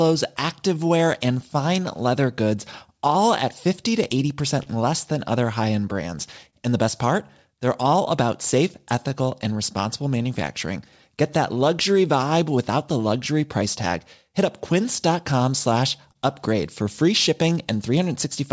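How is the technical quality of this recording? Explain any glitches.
The recording has timing faults throughout, plus three brief stalls. It has been through a call path, and nothing reaches above 8 kHz, which fits a wideband call codec such as G.722.

Clock drift between sender and receiver runs through the whole clip. The sender's clock is running slow, by roughly 3 percent. The receiver's jitter buffer therefore keeps draining and needs constant correction to stay in step. The result is small timing hiccups that recur through the speech at uneven intervals.

Repeated timing corrections span 0.02 to 18.13 s. Because the sender is slow, the receiver keeps stretching the audio by repeating short pieces. Effective speed is 98 percent, and about 0.4 s of material is added overall. These edits are small and unevenly spaced.

Short stalls from a late packet occur at 4.63 to 4.68 s, 6.50 to 6.55 s and 16.12 to 16.17 s. 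In each case a packet arrived late and the buffer ran empty. The receiver held the last sound for 30, 29 and 27 ms respectively, then resumed. Nothing is lost, but a sound lingers briefly with a slight buzz or dip.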